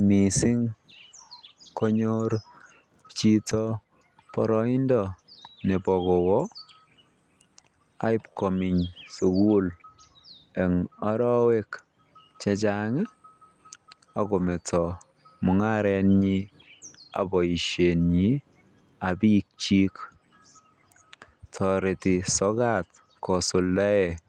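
Lost packets rebuilt from error correction appear at 2.17 s, 3.49 to 3.51 s, and 4.37 to 4.39 s, each a single 20 ms stretch. In each case a packet went missing, and the decoder played the lower-bitrate copy carried in the next packet. There is no silence. The speech just turns briefly rough and grainy. On a waveform the envelope runs on unbroken, while a spectrogram shows a thin slice of smeared, noisier texture.

From 8.33 to 8.38 s comes a short concealed packet loss. About 20 ms never arrived in time, and the decoder extrapolated roughly 23 ms from the preceding sound before crossfading back. It is heard as a quick smear or wobble. A spectrogram shows the preceding sound carried on across the slot, and the waveform stays continuous. Error-correction data also rebuilt part of this window, from 8.36 to 8.38 s.

The same error-correction rebuild returns at 9.66 to 9.68 s for one packet. 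It covers two packets from 11.40 to 11.46 s, about 40 ms, and four from 14.38 to 14.52 s, about 80 ms. That last one is a longer grainy, degraded patch, and it stands out on a spectrogram as a broader blurred band.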